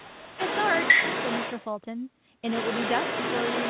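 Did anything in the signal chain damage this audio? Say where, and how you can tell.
Yes, in the call processing stage. The other side's voice leaks through from 0.0 to 1.66 s at roughly the talker's own level, and again from 2.46 to 3.69 s a bit quieter. The likely cause is the far end playing on a loudspeaker and the echo canceller leaving a residue in the mic signal.

Right at the start, from 0.01 to 0.39 s, the speech is suppressed in double talk. The talker dips hard, something like 20 dB at the deepest, while the other side is also talking. The echo canceller likely couldn't tell the two apart and turned both down.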